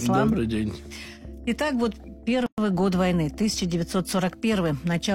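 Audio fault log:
2.46–2.58 s gap at a join of encoded pieces: untrimmed encoder delay and end padding leave a 118 ms gap, seen as a flat waveform stretch and a blank spectrogram column with smeared edges.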